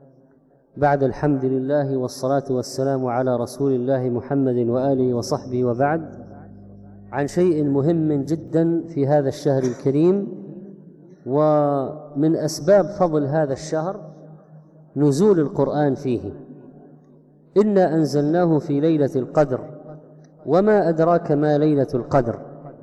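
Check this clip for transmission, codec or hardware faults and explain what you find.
One fault stands out: mains hum from 4.71 s to 8.48 s. During that stretch a steady low tone sits under the sound at 50 Hz, about 25 dB below the main signal, with some low harmonics above it. A ground loop or a nearby transformer is coupling the power line into the signal path, so the tone is locked to the mains frequency. What separates it from low-frequency rumble or handling noise is that the pitch never wavers and it has a clean harmonic structure, rather than a broadband, shifting thump.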